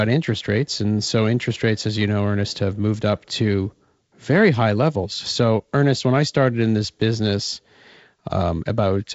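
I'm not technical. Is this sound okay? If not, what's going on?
Yes, it's fine: there's nothing wrong to point out, and it just has the sound of a good wideband phone call, where the very top end stops at around 7.7 kHz.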